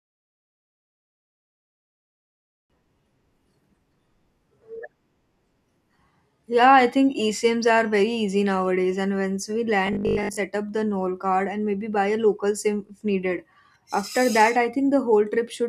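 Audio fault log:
0.0–2.70 s, truncation distortion on a fade: the fade-in rises from silence through a gain stage holding only 7 bits with no dither, so the quiet opening sounds gritty. On the waveform the low-level signal forms coarse square steps; the spectrogram shows broadband grit flecks.
9.87–10.37 s, robotic sound from repeated short buffers: just after "nowadays and once we" and before "up the", speech becomes a rigid metallic buzz near 50 Hz. The likely cause is a 20 ms chunk looping while real audio is dropped. The spectrogram shows evenly spaced 50 Hz harmonics; the waveform repeats near-identical cycles, with about 70% of it roughly repeated.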